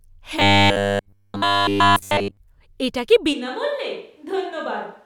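From 0.40 to 2.37 s, just before "এটা কী", the speech becomes a rigid metallic buzz at 100 Hz: robotic sound, likely from a 10 ms buffer repeated in place of missing audio. From 3.35 s to the end, after "এটা কী", the voice turns hollow and roomy, around 10 dB quieter over faint background noise, likely a switch to a distant microphone.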